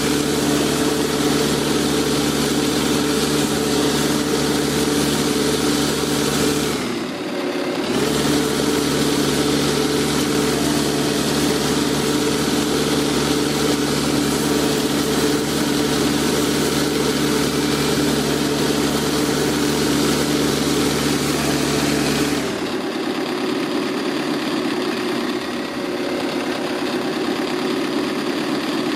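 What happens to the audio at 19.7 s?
At 19.7 s the audio is inside a stretch of crude rate conversion from 14.40 to 22.40 s: samples are repeated with no filtering, consistent with a 44.1 kHz to 48 kHz change. The resulting inharmonic, gritty fizz sits roughly 20 dB below the sound and tracks its loud, bright parts.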